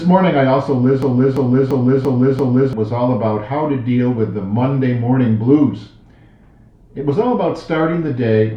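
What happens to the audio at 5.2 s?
Nothing goes wrong at 5.2 s; the audio runs through that moment intact, with no dropout, click or other disturbance.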